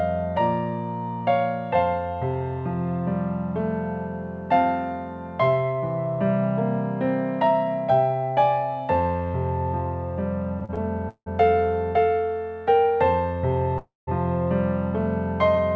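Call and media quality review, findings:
Repeated stalls (stutter), 10.60–11.28 s. Four gaps, longest 172 ms, about a third of the span concealed. Late packets drained the jitter buffer. Last sound stretched, nothing lost.

Call audio freeze, 13.78–14.09 s. About 290 ms filled, fading into 180 ms of silence. Likely packets held in transit, jitter buffer underrun. Audio resumes where it stopped, 290 ms later. Band-limited at 8 kHz, which fits G.722 at 64 kbps.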